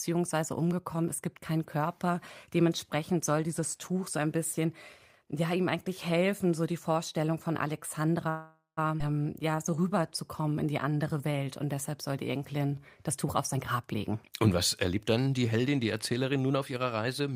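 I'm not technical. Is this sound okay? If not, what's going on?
No. The sound has four kinds of glitch, all from about 8.3 s onward.

Call audio freeze, 8.29 to 8.79 s: for about half a second the sound stalls into a fading buzz that ends in a brief silence. This was likely caused by data arriving late, with the receiver stretching the last sound while it waited. Nothing is lost, but a pause is inserted.

Skip ahead, at 8.99 s: the sound suddenly jumps forward. Roughly a third of a second of speech is dropped and the two sides are joined almost seamlessly.

Jitter buffer slow-down, 9.42 to 10.00 s and 10.42 to 12.82 s: the speech plays slower, at 88% and then 91% speed, with the pitch unchanged. The receiver repeats tiny slices of sound many times to rebuild its reserve, which drags sounds out.

Jitter buffer speed-up, 13.09 to 14.48 s and 14.88 s to the end: the speech runs faster, at 113% and then 110%, with the pitch unchanged. 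The receiver had too much audio stored and cut out tiny slices to catch up, which makes it sound hurried.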